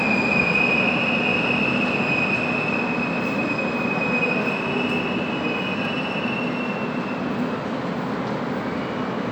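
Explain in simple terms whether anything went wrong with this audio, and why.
One thing did go wrong, at about 5.85 s. There's a single sharp click, and it's most likely dropped samples. A handful of the tiny measurements that make up the recording went missing, a tiny fraction of a millisecond's worth. That's far too little to lose any actual sound, but the waveform suddenly jumps ahead to a later value instead of moving smoothly, and your ear hears that jump as a quick tick.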